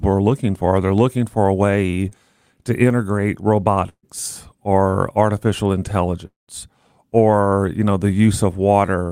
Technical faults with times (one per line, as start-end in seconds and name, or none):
2.09-2.13 short concealed packet loss
3.89-4.05 burst of packet loss
6.27-6.50 long network dropout